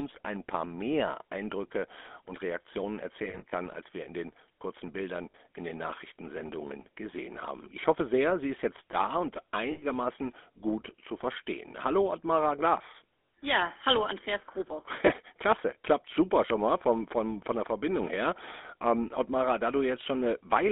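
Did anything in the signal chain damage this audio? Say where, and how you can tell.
Yes. At the codec stage, the whole clip has been through the GSM full-rate codec at 13 kbps. It is a vocal-tract model driven by regularly spaced pulses with a thinned excitation. This gives the speech a plainly audible buzzy, gravelly roughness throughout, squeezed into a band of roughly 250 Hz to 3.5 kHz.

At the network stage, lost GSM frames were concealed by repeating the last good frame's settings, leaving brief rough, metallic rings. This happens at 3.24–3.52 s, before "als wir in den", where about 120 ms is lost in runs of about 40 ms or less across 280 ms. It also happens at 5.30–5.35 s, before "in den"; at 9.72–9.84 s, after "ist jetzt da und"; at 13.26–13.28 s; and at 15.06–15.10 s.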